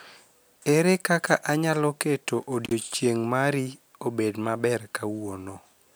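Right after "kaka anyalo keto", around 2.65 to 2.72 s, there's an intermittent contact: a loose connection drops the speech for about 49 ms, crackling at both edges before "mari obed maber".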